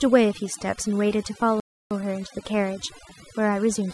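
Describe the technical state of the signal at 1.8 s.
At 1.8 s the output is in a playback stall, silent from 1.60 to 1.91 s (about 308 ms), likely because the player ran out of data. Overdone noise removal runs throughout: bands near the noise estimate are pulled down, leaving a lowered background that breaks up into twinkling specks rather than smeared codec blur.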